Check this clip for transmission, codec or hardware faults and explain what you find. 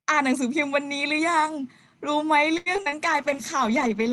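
Two transmission faults appear in the final part of the speech.

From 2.57 to 2.94 s there is repeated packet loss, producing robotic sound. The stream dropped or delayed packets four times in quick succession. Each gap was bridged by stretching the preceding audio, with the longest gap at 86 ms, so roughly 45% of that span is synthetic fill. The speech turns choppy and robotic, with fragments missing between the patched sections.

From 3.05 s to the end, a call bitrate drop takes over. The connection's bandwidth estimate fell, and the encoder was forced to spend far fewer bits. The sound points to a fall from about 32 kbps to around 13 kbps, held for the remaining second or so. At that rate the codec quantises coarsely and trims the upper frequencies, so the speech comes out rough, watery and muffled.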